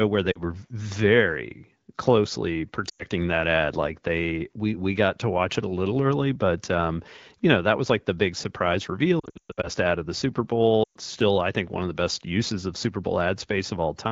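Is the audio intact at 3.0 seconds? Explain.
No. Lost AMR speech frames from 2.89 to 3.03 s, just before "that ad": the decoder repeats the last good pitch and vocal tract settings with falling gain, so the sound drops to near silence within two frames. On a spectrogram, frozen harmonic bands dim toward a gap; the waveform's envelope decays.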